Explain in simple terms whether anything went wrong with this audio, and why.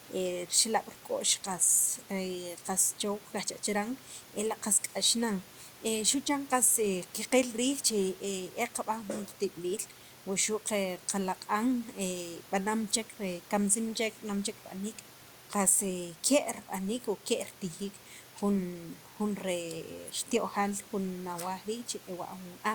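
Nothing went wrong here: the recording holds together throughout, with no dropouts, glitches or other faults to point to at any moment.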